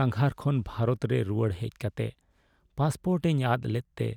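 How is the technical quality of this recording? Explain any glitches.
No audible glitches or faults.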